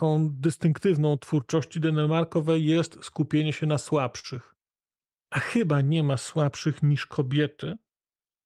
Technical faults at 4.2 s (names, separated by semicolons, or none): clock drift between sender and receiver; short stall from a late packet